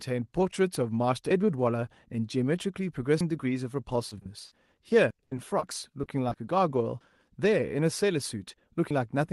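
At 1.31 s the sound skips forward abruptly, with roughly a tenth of a second gone and the two sides butted together without any pause. The same jump returns at 3.21, 5.11, 7.01 and 8.91 s, a steady rhythm of about 1.9 s. That regularity points to audio missing between chunks, likely from a recorder or processor handling the stream in 2-second blocks and dropping a slice at each handover.

Around 4.09 to 4.13 s and again at 4.19 to 4.23 s come brief smears, each lasting 20 ms. A slightly longer one, 40 ms, follows at 4.47 to 4.53 s, and another 20 ms smear at 5.59 to 5.63 s. These are short concealed packet loss. The receiver bridged each small hole by extending the preceding sound and then blending back into the real signal.

Between 5.23 and 5.33 s a longer stretch, 80 ms, turns into a held, fading continuation before the audio resumes further along. This is a burst of packet loss. Several consecutive packets failed to arrive in time, and the concealment stretched and faded the last sound across the gap.

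From 6.01 to 6.37 s the sound turns choppy, with pieces missing, from repeated packet loss. Four separate holes, none longer than 20 ms, were patched in quick succession, so about a fifth of that span is synthesised. The call codec's top end stops near 12 kHz throughout the clip.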